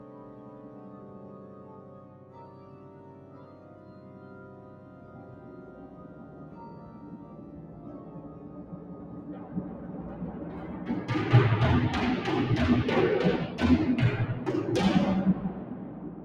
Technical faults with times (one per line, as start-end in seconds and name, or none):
0.00-16.24 noise suppressor applied to music or sounds